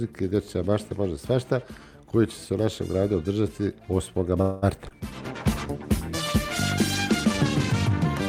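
At 4.41 s the sound stalls and is stretched into a fading buzz for about 0.21 s. This is a call audio freeze, likely from delayed packets emptying the jitter buffer. Nothing is lost afterwards.

From 4.88 to 4.92 s there is short concealed packet loss. About 20 ms never arrived, and the patched gap comes through as a brief smear.

From 5.11 s to the end there is a call bitrate drop from 64 to 22 kbps. It stays at its lowest for about 2.8 s, and the sound turns coarse, watery and duller.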